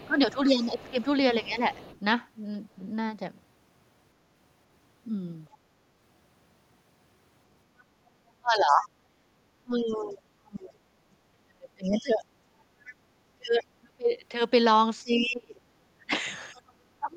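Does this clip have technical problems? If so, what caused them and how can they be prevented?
Yes. There is speech suppressed in double talk from 0 to 1.63 s (dips of about 15 dB) and from 8.4 s to the end (dips of about 30 dB, roughly four seconds affected in total). The waveform shows the envelope pinched into gaps. The likely cause is an echo canceller turning everything down while both sides talked. Tuning its double-talk detector, or using a full-duplex canceller, prevents this.

The other side's voice is leaking through at 0 to 1.99 s, 7.8 to 9.95 s, 11.92 to 12.94 s and 15.21 to 16.61 s. It sits about 25 to 40 dB below the speech and shows as faint harmonic traces. This is likely residual loudspeaker echo. Lower speaker volume or headphones prevent it.

The background is gated by the echo canceller from 12.53 to 12.69 s, dropping about 13 dB for 150 ms. This shows as a brief notch in the noise floor. 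Gentler residual-echo suppression and comfort noise prevent it.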